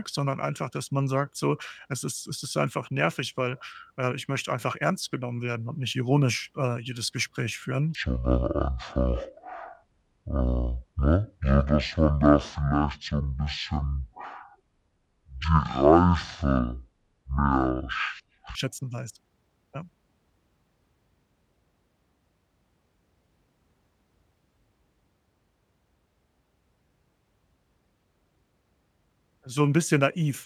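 From 7.95 s to 18.55 s the speech plays at about half speed, 0.5 times, just before "schätzen weiß". Pitch drops roughly ten semitones, so the section is deep and dragging. This section at the wrong speed is likely from playback against a mismatched clock.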